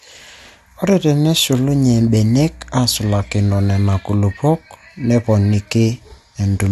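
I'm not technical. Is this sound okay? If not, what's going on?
No. Mains hum runs from 1.68 to 3.65 seconds: a steady low drone at 60 Hz beneath the speech. Electricity from the power line leaked into the recording, likely through a grounding problem or a nearby transformer.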